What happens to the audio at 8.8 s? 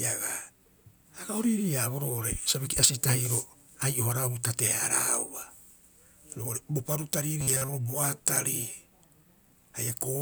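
Nothing goes wrong at 8.8 s; the audio is intact through that moment, without any dropout, click or other fault.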